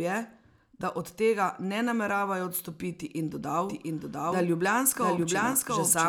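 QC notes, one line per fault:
3.69 s to the end, doubled audio track: a second copy of the speech enters the mix, most likely from a slower capture path or an edit that leaves two copies out of step. It trails the original by roughly 0.7 seconds at about the same level, full-band and with no decay or room colour, so it reads as a clean overlapping repeat rather than an echo. It cuts in abruptly at 3.69 s and continues to the end of the clip.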